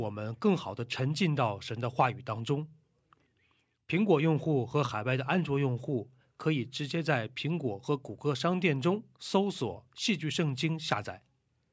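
No faults are audible in the speech; the only processing heard is the call's microphone chain, with its high-pass filter trimming the lowest bass and no content above 8 kHz.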